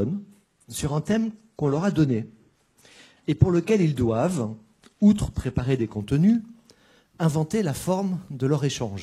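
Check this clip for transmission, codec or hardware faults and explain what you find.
One fault is present: the audio opens on a low-quality stream and improves partway through.

Adaptive stream starting at a low bitrate, 0.0 to 6.0 s. The player began on a cheap version of the stream so it could start quickly, then switched to a better one once it had gauged the connection. The opening sound points to HE-AAC at about 16 kbit/s, with dull or synthetic-sounding treble and stronger codec artefacts. At 6.0 s quality jumps without a gap, consistent with AAC-LC at 96 kbit/s. Before the switch, nothing is present above 12.4 kHz.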